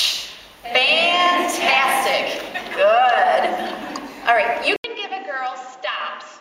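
At 4.76 s the sound drops out for 80 ms. It returns duller and about 10 dB quieter, with nothing above 7.6 kHz and a faint new noise floor. The input likely switched to a poorer device. This lasts to the end.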